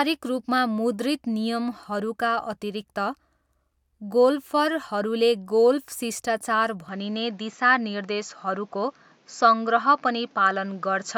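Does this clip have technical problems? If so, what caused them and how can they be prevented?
Yes. From 6.89 s the speech suddenly loses everything above 7.6 kHz and gains a faint new noise floor. That's likely an input switched to a poorer device. Lock the input device before recording.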